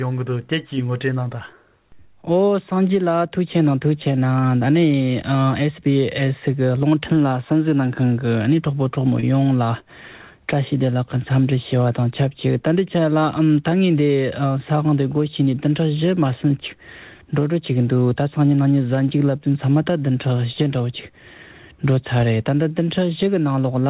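At 9.2 s there is a brief smear lasting about 40 ms, where the sound blurs and then settles back. This is short concealed packet loss: about 20 ms of audio arrived too late, and the receiver covered the gap by extending what it had just played before blending back. Throughout, nothing reaches above 4 kHz, which fits the narrowband G.711 mu-law call path.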